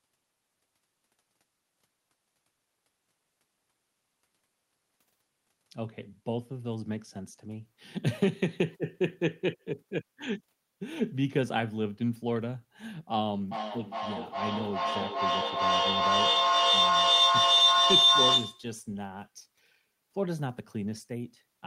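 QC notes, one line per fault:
13.51–18.74 s, feedback howl. A tone near 4 kHz builds until it peaks about 8 dB above the speech, pulsing roughly every 0.4 s. Sound from a loudspeaker re-enters a microphone and gains level each trip. The loop's favoured frequency grows into a sustained howl.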